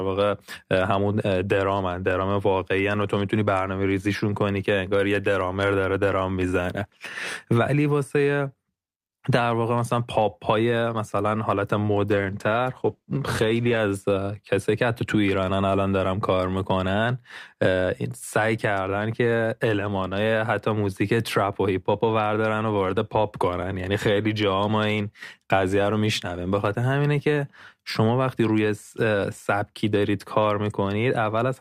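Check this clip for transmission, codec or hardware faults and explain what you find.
One transmission fault stands out: a call bitrate drop. From 12.08 s to 13.87 s the speech turns rough and watery and loses its top end for about 1.7 s, then clears. The call's bandwidth estimate fell, so the encoder was told to spend far fewer bits. Opus coded the speech more coarsely and trimmed the high frequencies, which fits a fall from around 64 kbps to roughly 14 kbps before the rate recovered.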